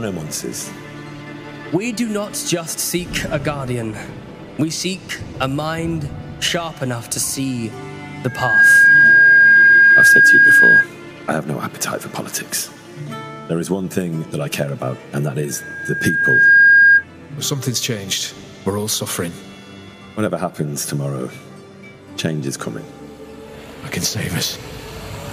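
Loudspeaker feedback squeal at 8.27–10.88 s and 15.49–17.05 s: a mic-speaker loop runs away at 1.6 kHz, swelling quickly, then more gradually, well above the sound.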